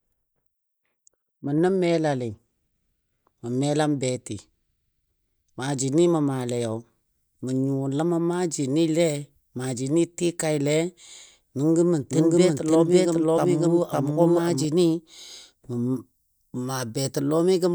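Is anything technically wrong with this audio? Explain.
Yes. From 12.11 to 14.65 s the speech is heard twice at once, a doubled audio track: a second, equally loud copy trails the original by about half a second, full-band and dry, with no room tail, and it cuts in and out abruptly at those points. The likely cause is the same signal arriving through two paths, one slower than the other, or an edit that left two out-of-step copies overlapping in the mix.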